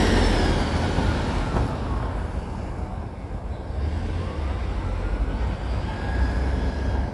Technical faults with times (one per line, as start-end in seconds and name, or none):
0.00-7.14 Dolby Digital compression